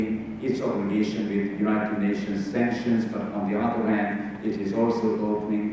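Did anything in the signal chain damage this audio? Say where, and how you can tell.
No, nothing stood out on listening that would point to damage at any stage of the signal chain.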